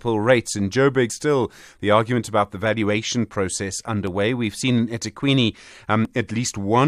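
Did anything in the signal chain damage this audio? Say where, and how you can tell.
Yes, at the codec stage, with damaged data in a compressed stream. There's a brief glitch at 1.09 s, just before "still the argument about", and another at 6.04 s. Corrupted bytes there made the decoder misread those frames, lose sync and hunt for the next header.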